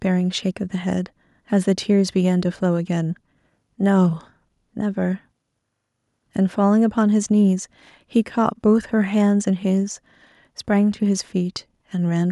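Listening through the speech, nothing stood out as a technical fault at any point.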